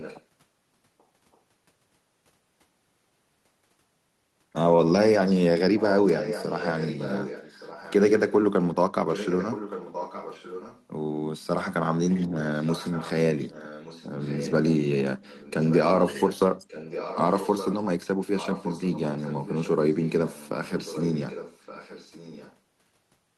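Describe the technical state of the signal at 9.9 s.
At 9.9 s, inside an echo leak from 9.08 to 10.83 s, the far end's echo canceller likely let its loudspeaker's output back through its microphone, so a copy of the speech returns about 1.17 s late, roughly 10 dB below the direct speech.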